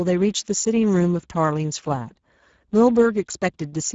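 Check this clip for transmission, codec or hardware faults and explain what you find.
One codec fault runs through the entire clip. Throughout, the speech sounds plainly hoarse and noisy, with nothing above 7.7 kHz. This is Speex codec damage: too few bits for the excitation, which points to a low setting around 10 kbps.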